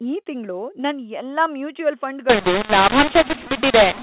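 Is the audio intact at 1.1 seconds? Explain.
Yes, the speech is intact at 1.1 s, carried cleanly within the narrow telephone band of its G.711 mu-law coding with no dropout, click or distortion at that moment.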